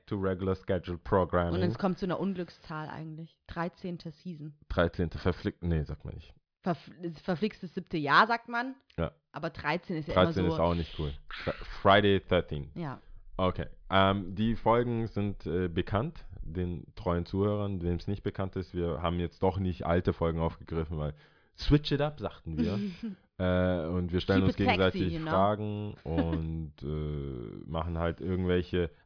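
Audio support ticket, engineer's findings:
No faults found on listening through the speech recording. Nothing to escalate at this stage; ticket can be closed as no defect observed.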